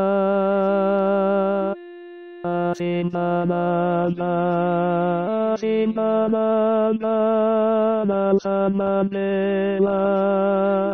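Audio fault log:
3.70 s to the end (10.93 s): adaptive stream at a lower bitrate. With no gap in playback, the sound suddenly loses its top end, with nothing above about 9.7 kHz, and compression artefacts rise. The player has switched to a leaner version of the same stream, likely because the connection slowed. The change in quality fits a drop from roughly 96 kbit/s AAC to about 24 kbit/s, where the encoder sacrifices high frequencies first.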